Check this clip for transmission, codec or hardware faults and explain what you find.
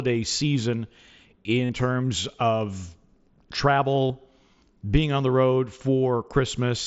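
Two short breaks in the speech come from concealed Bluetooth headset packet loss, heard through the mSBC headset codec's wideband sound. The first is at 1.65 to 1.69 s, about 45 ms, just before "terms of". The second is at 4.08 to 4.10 s, about 22 ms. Audio packets failed to arrive, and the receiver filled each gap by repeating the best-matching recent stretch of waveform. The longer gap, which points to several packets lost in a row, becomes a brief buzzy tone held at full level with a slight warble as the real audio resumes. A plain dropout would fall silent or click instead.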